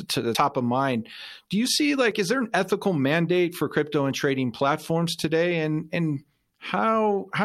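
A speech recording with three abrupt skips, at 0.35 s, 2.11 s and 4.11 s, each heard as the sound jumping forward rather than pausing. The first loses something like 70 ms, the later two around 20 ms each. Likely a dropped buffer (overrun), with samples overwritten before being read. A waveform shows a sharp discontinuity with no gap, and a spectrogram a thin vertical broadband line where the harmonics shift suddenly.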